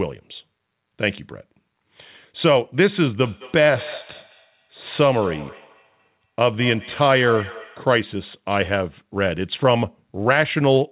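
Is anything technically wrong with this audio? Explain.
Yes. From 3.21 to 7.96 s there is feedback echo between two devices. A second device nearby replays the call, and this microphone hears it again. Its echo canceller can't remove that. The speech returns roughly every 200 ms, thin and ringing, at about 17 dB below the speech.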